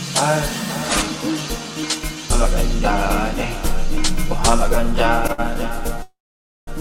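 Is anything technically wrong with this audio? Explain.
Yes, there are two timing faults.

At 5.32 to 5.40 s, a short stall from a late packet: the jitter buffer emptied, so about 59 ms of held sound fills the wait before the audio resumes. A spectrogram shows briefly smeared, flat bands.

At 6.03 to 6.69 s, a call audio freeze, likely from packets held up in transit, inserts a 647 ms gap. A brief fading buzz gives way to about 520 ms of silence, a flat waveform line, before the audio resumes where it stopped.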